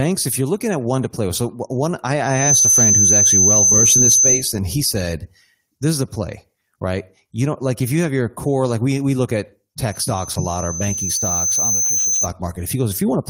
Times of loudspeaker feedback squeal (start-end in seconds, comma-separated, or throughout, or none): 2.23-4.50, 9.92-12.29